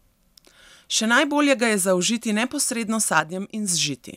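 At 3.20 s, after "je zaužiti neposredno s", the speech drops about 6 dB until 3.68 s, likely one channel dropping out, which halves the mono sum.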